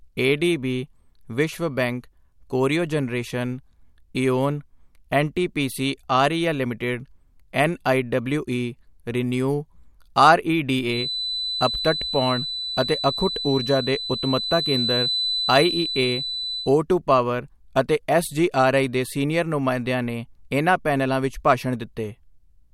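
From 10.84 to 16.74 s, a feedback whistle sits behind the speech. It is a thin, steady tone at 4 kHz, a little below the speech level, swelling and fading slowly in level. The likely cause is a loudspeaker-to-microphone loop held right at the edge of feedback.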